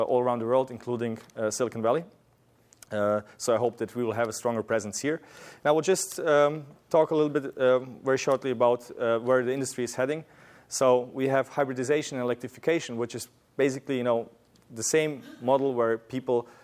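No technical faults can be heard anywhere in the signal.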